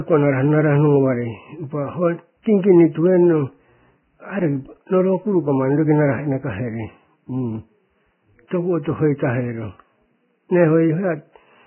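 A speech clip with heavy Vorbis compression damage throughout: nothing is left above 3 kHz, and the remaining treble is grainy and hissy, with blurred attacks. This is likely a very low bitrate, around 10 kbps. Unlike a simple low-pass filter, fine detail in the surviving treble has turned to noise-like grain.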